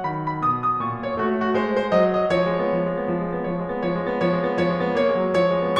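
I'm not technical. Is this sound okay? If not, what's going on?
Yes, this sound is okay, and there's nothing going on with it that needs fixing.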